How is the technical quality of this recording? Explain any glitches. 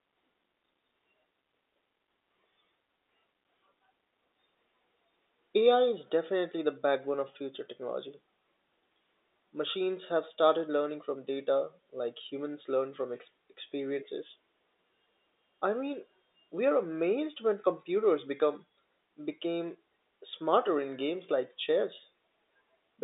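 No glitches can be heard; the signal has the narrow band of a telephone line, roughly 300 Hz to 3.7 kHz, which fits ordinary 64 kbps G.711 mu-law telephone coding, and it stays steady and intact throughout.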